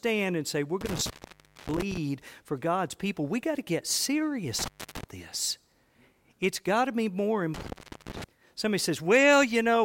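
Speech that cuts out with crackle at 0.81, 4.59 and 7.54 s, for roughly 0.59, 0.29 and 0.42 s: intermittent contact from a loose cable or plug.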